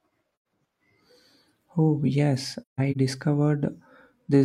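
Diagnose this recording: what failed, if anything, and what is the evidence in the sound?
The codec stage dropped AAC frames and muted them. The speech falls into soft-edged holes at 0.32–0.45 s (about 128 ms, roughly three frames) and 2.62–2.96 s (several gaps, longest around 150 ms). Overlapping windows fade each hole in and out.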